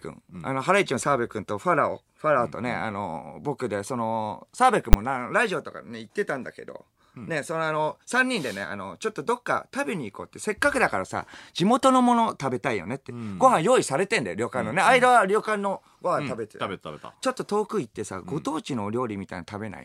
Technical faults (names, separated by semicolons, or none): invalid numbers at full scale